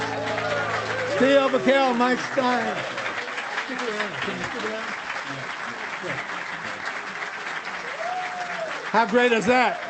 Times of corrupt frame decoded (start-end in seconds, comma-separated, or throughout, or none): none